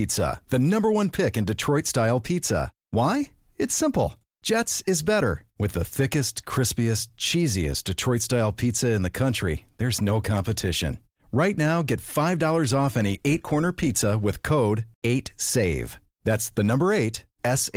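The clip is speech, and nothing is technically wrong with it.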